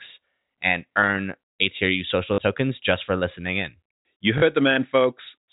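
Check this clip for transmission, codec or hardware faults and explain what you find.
Two brief dropouts concealed by repetition are audible in the speech, over a telephone-band G.711 path with nothing above 4 kHz.

Packet loss with last packet repeated, 2.34–2.38 s and 4.38–4.42 s: each 40 ms gap, fitting two 20 ms packets, is filled by replaying the last packet, producing a buzzy robotic stutter.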